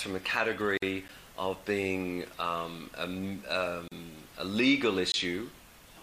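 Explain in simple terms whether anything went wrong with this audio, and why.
Two kinds of problem can be heard, each happening twice.

The first is a gap at a join of encoded pieces, from 0.77 to 0.82 s (about 49 ms) and from 3.88 to 3.92 s (about 36 ms). The audio seems to have been compressed in separate chunks and then stuck together without trimming the bit of silence that compression adds at each chunk's start and end. The sound briefly drops out and then carries on where it left off. The edges of these gaps are slightly softened rather than razor-sharp.

The second is a block of digital silence, at 1.08 s (about 10 ms) and from 5.12 to 5.14 s (about 20 ms). Here a short stretch of the audio was simply replaced with nothing, likely because the playback or recording program didn't deliver its next batch of sound in time. Unlike the join gaps, the cut in and out is instant, so the shorter one comes across as a tick and the longer one as a short hole.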